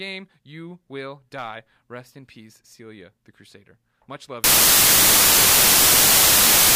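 From 4.44 s to the end, samples are built from the wrong bytes: the reader misassembles each value, so noisy low-order bits become dominant. The speech turns into loud, harsh broadband noise, a dense full-band smear on a spectrogram, and the waveform fills out into a solid block.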